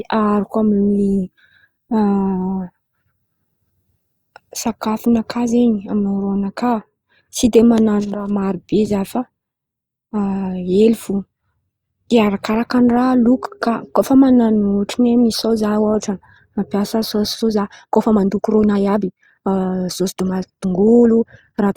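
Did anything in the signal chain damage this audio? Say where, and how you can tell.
Yes: a time-stretched section runs from 17.31 s to the end of the clip at 21.77 s. Here the speech abruptly speeds up to about 1.47 times its earlier pace, yet its pitch does not rise, so it sounds rushed rather than chipmunk-like. That points to processing that squeezes duration by discarding short slices of the waveform while preserving pitch, likely applied at the storage or playback stage to force the audio into a shorter length.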